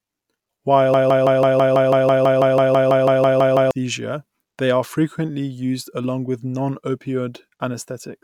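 At 0.94 s the speech turns into a broken-record loop. A slice of about 164 ms plays over and over, back to back, roughly seventeen times, until the audio moves on at 3.71 s. It sounds like a rapid stutter of the same fragment. The likely cause is that the player or stream stalled and kept replaying the last fragment it held, so whatever should have been heard in those 2.8 seconds is simply gone.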